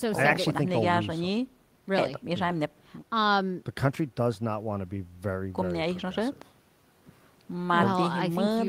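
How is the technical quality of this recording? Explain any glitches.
Nothing in the recording stood out as a technical problem on listening, so there are no glitches to explain.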